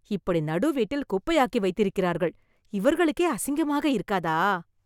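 No technical faults can be heard anywhere in the speech.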